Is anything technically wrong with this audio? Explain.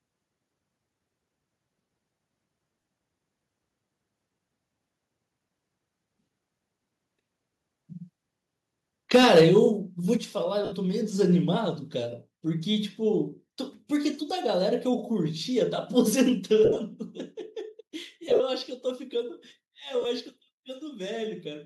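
Yes. The speech has three kinds of technical fault.

Lost LE Audio frames occur at 2.81–2.85 s, 10.65–10.72 s, 16.65–16.79 s, 18.29–18.40 s and 20.01–20.05 s. The gaps run 30 to 82.5 ms, which fits 7.5 ms Bluetooth frames. In the 16.65 s and 18.29 s events the losses are scattered rather than continuous. The LC3 decoder patches each gap by repeating the last spectrum with randomised phase. Voiced sound smears into a brief noisy hiss.

Microphone overload runs from 9.14 to 9.67 s. Peaks go about 6 dB past full scale, and a few percent of samples are flattened. The likely cause is input gain set too high for the converter. The clipped tops give the loudest syllables a harsh, crackling edge.

The microphone volume is stepped down at 9.16 s (about −3 dB), 10.17 s (about −5 dB), 16.29 s (about −3 dB) and 17.31 s (about −2 dB). Each time, the speech and background drop together as an abrupt level step. 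The first step comes right at the overload. This points to the likely cause: the call software cutting device input gain after detecting clipping.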